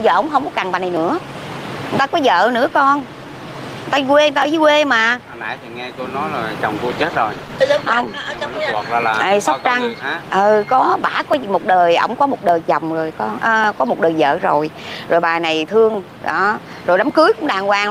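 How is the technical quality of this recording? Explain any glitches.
The recording has one clear glitch, a call bitrate drop, from 6.77 s to 8.99 s. For about 2.2 s the sound turns coarse and muffled, losing its high frequencies and taking on a rough, watery texture, then returns to full clarity. The quality shift suggests the encoder went from roughly 32 kbps to about 13 kbps after the call's bandwidth estimate fell. With fewer bits, Opus quantises more coarsely and trims the top of the spectrum. Unlike packet loss, the sound never breaks up, stutters or goes silent; it is continuously degraded.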